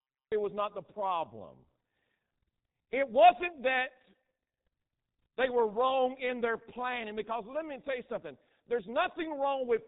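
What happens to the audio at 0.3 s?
Digital silence runs from 0 to 0.32 s, then the speech lands abruptly mid-sound just before "was not the problem". This cut-off start happened because the recording began late. The onset has no natural attack. When the speech enters, it is muffled and hoarse with smeared consonants and nothing above 3.8 kHz. That is the G.723.1 codec's heavy damage at 6.3 kbit/s.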